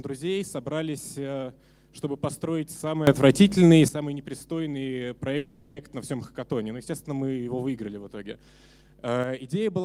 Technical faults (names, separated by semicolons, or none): sudden gain jump; call audio freeze